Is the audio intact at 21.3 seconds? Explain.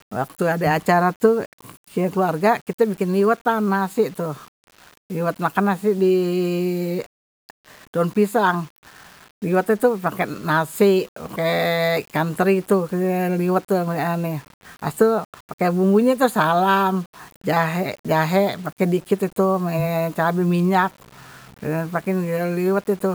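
No, at 21.3 s the speech has grainy, signal-following distortion throughout, likely low bit depth without dither, about 7 bits rounded, so quiet passages turn gritty.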